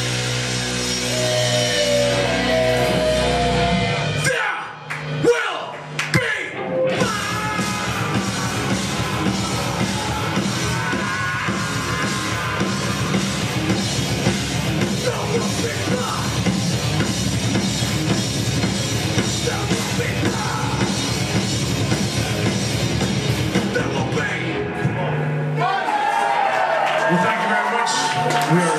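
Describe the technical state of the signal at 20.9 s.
At 20.9 s the signal is intact, with no dropout, distortion, glitch or other technical fault.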